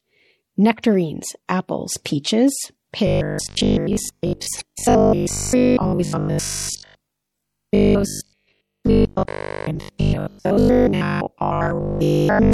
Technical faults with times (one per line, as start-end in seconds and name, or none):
0.00-12.54 MP3 compression
0.76-0.84 corrupt frame decoded
3.07-12.53 robotic sound from repeated short buffers
4.58-4.62 corrupt frame decoded
11.99-12.04 corrupt frame decoded